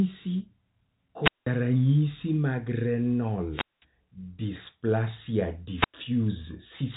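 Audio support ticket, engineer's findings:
Speech path cuts out three times: 1.22–1.47 s (mute about 190 ms), 3.51–3.85 s (about 210 ms), 5.72–5.97 s (about 100 ms). Probable component: analogue wireless mic receiver. Mechanism: RF fade, with the squelch muting the output. Each hole is preceded by a swell of hiss, which separates wireless microphone squelch dropout from clean network or codec gaps. Telephone-band G.711 path audible, top end stopping near 3.8 kHz.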